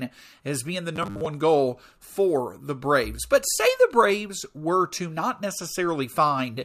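Robotic sound from repeated short buffers runs from 0.96 to 1.26 s, just after "as being the" and before "goal for the". Roughly half the audio there is a repeat of the previous 10 ms, likely because new audio arrived too slowly, imposing a rigid, metallic 100 Hz buzz.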